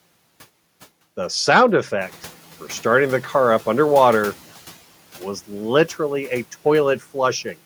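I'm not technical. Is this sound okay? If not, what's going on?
No. At around 2 seconds the background noise in the room gets louder, and the noise suppressor, the part meant to quiet that noise, is caught off guard. This is noise suppressor catching up: from 2.01 to 4.42 s, about two and a half seconds, you hear the new noise come through less quieted at first behind the speech, then gradually fade down as the suppressor adjusts to it.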